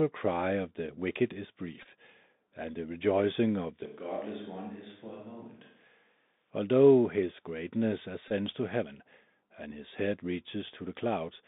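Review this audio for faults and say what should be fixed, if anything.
Bluetooth CVSD headset codec, throughout: the audio went over a Bluetooth headset link using the narrowband CVSD codec at 64 kbps. It encodes each sample as a single up-or-down bit with an adaptive step, so the line passes only about 150 Hz to 3.7 kHz. Loud, bright moments outrun the step and distort, sibilants turn scratchy, and a granular hiss sits under the speech. The damage is plainly audible across the whole clip. Prevention: record on the local device, or use a headset and phone that negotiate a wideband codec such as mSBC or LC3 instead of CVSD.

Bluetooth headset packet repeated, at 1.82 to 1.87 s and 8.28 to 8.32 s: voice packets between headset and phone were lost, and the chip decoded the previous packet's bits again. The first drop comes just after "of the wicked is". About 22.5 ms is lost, scattered over 30 ms, and the longest run is roughly 10 ms, so it comes out as a brief buzzy tick. 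The second comes between "his greatness" and "to heaven and his". Another 22.5 ms is lost, which fits six 3.75 ms packets. Prevention: keep the headset close to the phone, with a clear line of sight and away from Wi-Fi and 2.4 GHz interference.

Switch to a distant microphone, from 3.86 to 6.51 s: just after "and the rejoicing of", the sound suddenly turns roomy and hollow. It loses bass and drops about 10 dB in level, and room noise rises to roughly 35 dB below the speech. It snaps back just as abruptly at 6.51 s. The likely cause is that the close microphone's signal dropped out and the recording fell back to a microphone further away. Prevention: monitor the close microphone's input during recording and secure its connection so it cannot fail over to another source.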